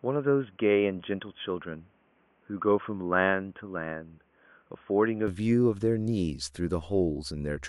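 From 0 to 5.28 s the speech is band-limited to 3.4 kHz and a little quieter, then opens up abruptly with no gap, likely an input switched to a poorer device.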